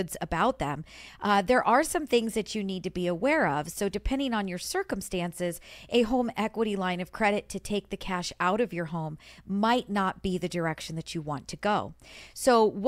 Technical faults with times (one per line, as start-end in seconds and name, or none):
none